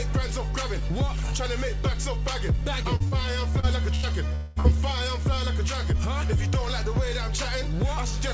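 Short concealed packet loss occurs at 2.96 to 3.03 s, 3.08 to 3.15 s and 3.60 to 3.66 s, and again at 4.60 to 4.67 s. Each time about 40 ms of audio failed to reach the decoder in time. The receiver covered the hole by extending the preceding sound for roughly 30 to 40 ms, then crossfaded back into the real signal. Each one is heard as a brief smear or wobble.

A burst of packet loss follows at 3.95 to 4.06 s. Here about 80 ms went missing in one run, more than a single short gap. The receiver stretched the last sound across roughly 80 ms and lowered it as the gap went on, so it comes out as a held buzz or fading hiss. The audio then picks up further along, with the missing stretch simply gone.

A long network dropout runs from 4.35 to 4.59 s, the likely cause being that no packets arrived for about 200 ms. Concealment filled the whole gap, about 210 ms, with a continuation of the last sound that fades away but never drops to silence. 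The audio returns slightly ahead of where it stopped, and within about a hundredth of a second the short loss at 4.60 s follows.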